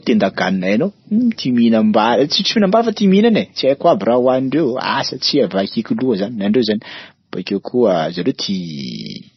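Speech throughout is likely marked by MP3 compression. The damage is heavy, which points to a bitrate near 24 kbps: the encoder drops weak frequency lines frame by frame, producing watery, swirling artefacts and smeared attacks, and nothing remains above 6 kHz.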